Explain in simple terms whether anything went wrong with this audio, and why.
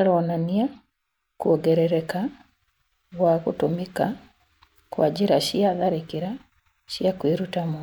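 At 0.76 s a corrupt frame was decoded: one small chunk of the compressed speech had scrambled data, and the player played it anyway. The misread values put sound at the wrong pitches for that instant, giving a very faint, quick chirp, squeak, blip or burst of noise.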